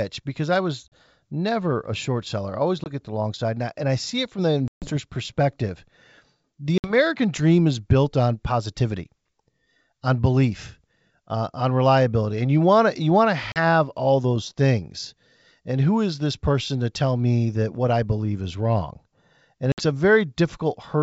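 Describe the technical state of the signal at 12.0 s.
At 12.0 s the speech is intact, with no fault audible, and the G.722 wideband telephone coding at 64 kbit/s carries it up to about 7 kHz as that coding normally does.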